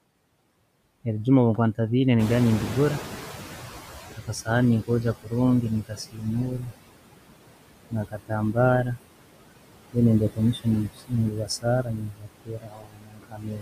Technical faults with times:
0.00-13.62 noise suppressor artifacts
2.19-5.69 noise suppressor catching up
4.16-4.48 speech cut by the noise suppressor
5.22-5.33 speech cut by the noise suppressor
5.88-6.72 speech cut by the noise suppressor
7.90-8.98 speech cut by the noise suppressor
10.33-13.62 speech cut by the noise suppressor

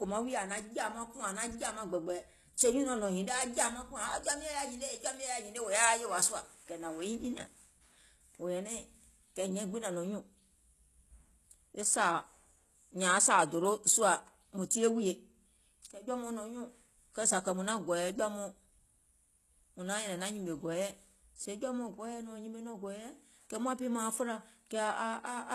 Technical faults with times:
0.00-25.54 low-bitrate audio saved at a high bitrate

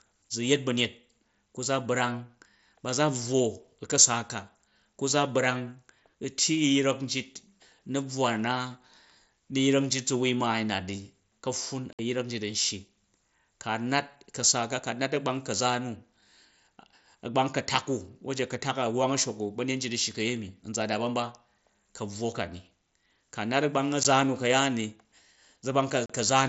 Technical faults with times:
11.93-11.99 unconcealed Bluetooth headset packet loss
24.03 unconcealed Bluetooth headset packet loss
26.06-26.10 unconcealed Bluetooth headset packet loss

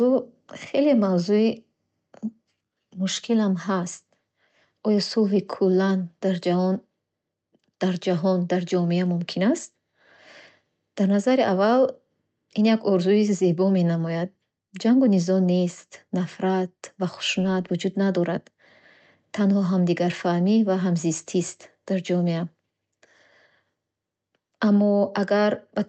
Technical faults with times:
none

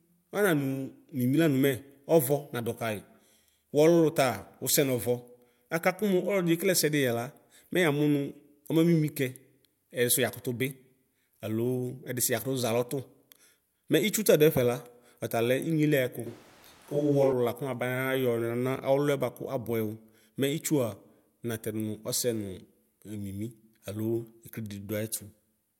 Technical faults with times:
16.27-17.32 switch to a distant microphone

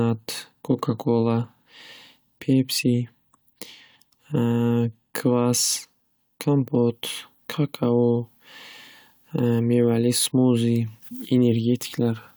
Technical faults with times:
none

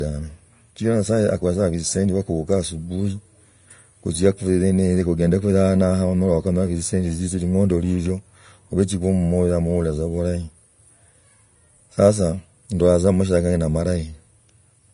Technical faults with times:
0.00-14.94 Vorbis compression

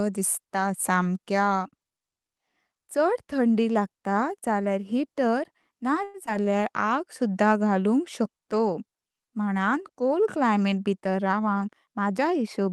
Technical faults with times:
6.03-6.17 call audio freeze
6.26-6.30 short concealed packet loss
11.11-12.10 jitter buffer speed-up

